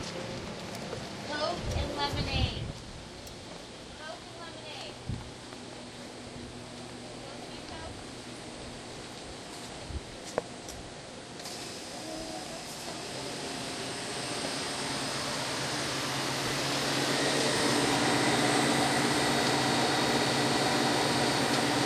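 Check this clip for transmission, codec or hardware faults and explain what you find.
Two brief reordering faults show up, both of the chunks out of order kind. At 16.46 to 16.50 s and again at 17.56 to 17.60 s, one 20 ms block of audio reached the output a block late and played after its successor. No audio is missing, but the swapped order leaves three hard joins in each 40 ms span. Each place is heard as a tiny jumbled stutter in the sound.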